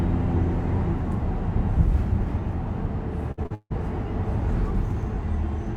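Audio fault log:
3.31–3.72 s, repeated packet loss (robotic sound). Successive gaps, the longest 159 ms, are filled by repeating the preceding sound. Most of the stretch sounds choppy.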